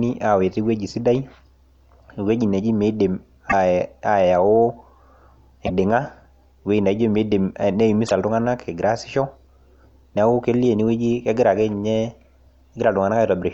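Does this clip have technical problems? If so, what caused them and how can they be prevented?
Yes. Three brief glitches, at 3.49–3.53 s, 5.66–5.70 s and 8.06–8.11 s, make the speech skip ahead abruptly. Each lasts roughly two MP3 frames of 26.1 ms. The likely cause is a broken MP3 bit reservoir: frames were dropped, so the following frame reached back for borrowed data and decoded bytes from the wrong frame. Cutting or streaming MP3 only at reservoir-safe frame boundaries, or editing from a PCM source, prevents this.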